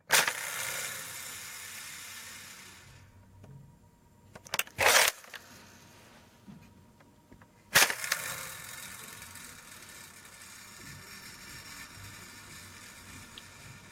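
Sounds carry gain pumping throughout, with the gain ducking around 15 dB under each loud sound. This is likely from excessive input gain driving a fast limiter.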